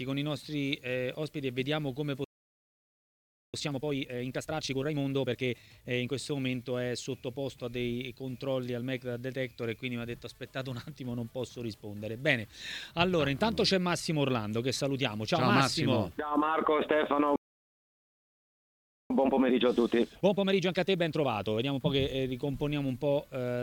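At 2.24 s the sound cuts out in mid-flow and stays silent until 3.54 s, a playback stall of about 1.3 s. The player likely ran short of data or had its output thread blocked. Unlike a brief dropout, which loses a fragment while the sound keeps moving, this gap is long and clean before the audio resumes.

Straight after, from 3.54 s to 6.12 s, comes time-compressed catch-up at 1.5 times normal speed. The player clears its backlog by cutting out small slices and cross-fading across them. The sound is hurried at its normal pitch. A plain speed-up would raise the pitch, which does not happen here.

The pattern repeats later. A second playback stall runs from 17.36 s to 19.10 s and lasts about 1.7 s. It is likely caused by the same starved or blocked playback path. It is followed by catch-up from 19.10 s to 22.10 s at a gentler 1.25 times speed, so the hurrying is milder than the first time.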